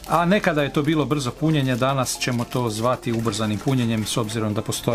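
No technical faults can be heard anywhere in the audio.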